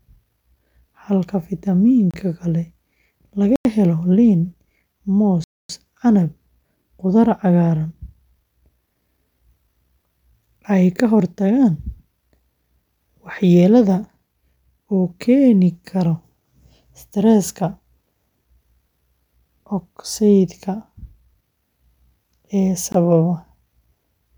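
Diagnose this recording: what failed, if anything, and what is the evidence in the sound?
Blocks of digital silence at 2.11 s (28 ms), 3.56 s (93 ms, which fits a 4096-sample buffer), 5.44 s (254 ms) and 22.92 s (20 ms) point to the driver or buffer stage. The output buffer went unfilled, so speech cuts out and back with no fade.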